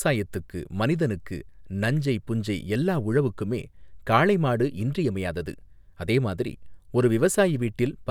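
Nothing goes wrong anywhere in this bit of speech, so there's no technical fault to point to.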